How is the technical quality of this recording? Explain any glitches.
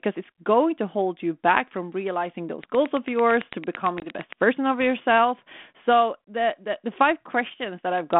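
The recording has two distinct faults, both inside the narrow telephone band of a 32 kbit/s G.726 ADPCM line, which passes roughly 200 Hz to 3.5 kHz with only light coding grain.

From 2.64 to 4.34 s there is a train of clicks: about 15 near-identical pops at a steady 8.9 per second, peaking around 10 dB above the speech and audible in pauses too. The likely cause is electrical interference or a struggling interface injecting a repeated pulse. What sets it apart from a dropout is that each click is added on top of otherwise intact sound, and they keep a regular beat.

At 4.00 s, within the click train, packet loss on the ADPCM call leaves a hard-edged 20 ms hole, consistent with about one lost packet. Because the decoder's adaptive predictor and step size lose track of the sender's state, the speech returns slightly distorted, and has settled by 4.13 s. Unlike the evenly spaced clicks, this is a single gap followed by a short recovery.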